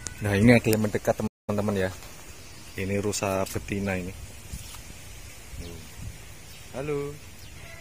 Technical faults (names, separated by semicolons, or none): playback stall